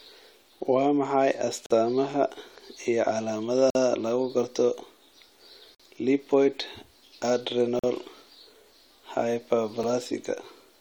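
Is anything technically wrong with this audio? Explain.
Yes. This speech has a gap between stream segments at 1.66–1.71 s, 3.70–3.75 s, 5.75–5.80 s, 7.79–7.84 s and 9.83 s. About every 2 s, the segment timestamps leave a hole that the player fills with silence. You hear hard-edged dropouts of about 44–49 ms, and a very brief one at the end, but no audio is lost.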